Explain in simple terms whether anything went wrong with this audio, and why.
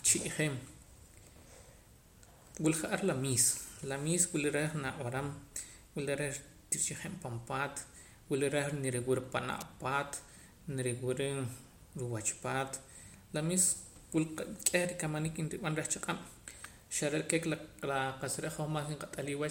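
Two sharp snaps cut through the speech, one at 9.61 s and another at 16.64 s. They sound like an electrical switching spike, likely a nearby switch or motor arcing briefly and the audio line picking up that jolt on top of the recording.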